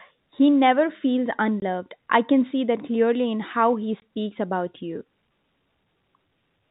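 Speech over a G.711 telephone path, band-limited below 4 kHz, broken by packet loss filled with silence: two 20 ms holes at 1.60–1.62 s, between "never feels" and "I can see that", and at 4.00–4.02 s, between "clearly in how he" and "about you". Each gap fits a single lost packet. Plain silence, not repeated or smeared sound, rules out concealment.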